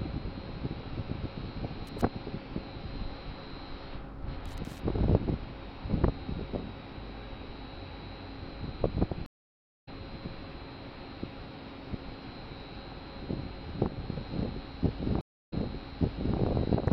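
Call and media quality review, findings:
Loose connector crackle, 1.87–2.02 s and 4.46–4.79 s. Irregular scratchy bursts from a worn or dirty contact intermittently opening the line. Probable component: cable or jack. On the waveform, chopped gaps. On the spectrogram, broadband vertical streaks scattered unevenly through each burst.

Stream reconnect, 9.26–9.88 s. Dropout of about 0.59 s while the connection re-established and a new decoder started mid-stream. Playback resumes roughly 0.4 s later in the stream, so material is skipped. On the waveform, a flat gap and then an abrupt or faded-in restart. On the spectrogram, a blank column with a content discontinuity across it.

Stream reconnect, 15.21–16.39 s. Silence of about 0.29 s, then the server resent a burst, so the audio resumes 0.89 s earlier and the preceding material repeats. Probable component: network or streaming player. On the spectrogram, a short blank band followed by a pattern that duplicates the one just before the gap.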